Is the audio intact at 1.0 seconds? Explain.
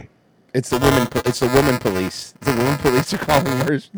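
No. Buffer tearing runs from 0.70 to 3.68 s: the writer and reader cross each period, splicing in roughly a sixth of stale audio, producing a steady 375 Hz rattle, which fits a 128-sample buffer. Unlike random dropouts, it is regular and present only with signal.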